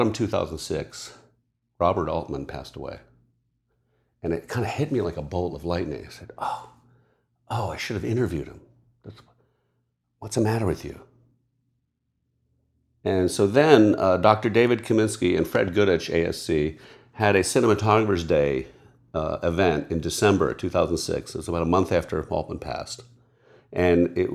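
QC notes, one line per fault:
15.55–15.70 s, loud pop. Two sharp pops arrive in quick succession, about 10 dB above the speech, which carries on underneath. A sudden voltage step, likely from a plug, switch or static discharge, entered the signal path and became brief pulses.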